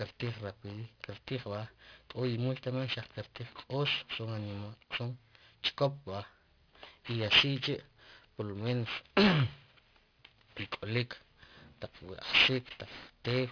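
Aliasing runs throughout the speech, pointing to a drop from 48 kHz to about 11 kHz with no low-pass filter first. Energy above the 5.5 kHz fold mirrors back as false tones, roughly as loud as the real content, making sibilants gritty and metallic.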